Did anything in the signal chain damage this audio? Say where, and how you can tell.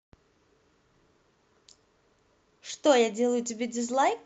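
No, nothing in the signal chain has damaged this speech. It carries the sound of a working WebRTC call path, with the top end stopping at about 8 kHz, which points to an Opus codec set to that bandwidth, and the usual low-level coding texture that goes with it.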